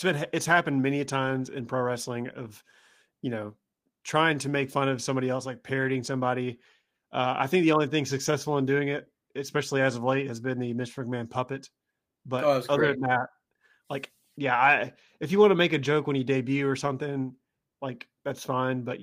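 No technical faults can be heard anywhere in the recording, and the signal holds steady throughout the speech.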